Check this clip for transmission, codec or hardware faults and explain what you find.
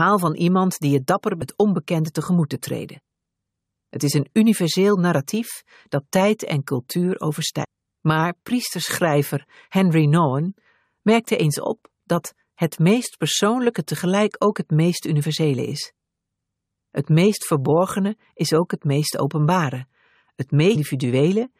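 Three brief glitches come from damaged data in a compressed stream, at 1.41 s, 7.63 to 7.65 s, and 20.75 to 20.77 s. Corrupted bytes make the decoder misread frames and lose sync. Each sounds like a short chirp or blip.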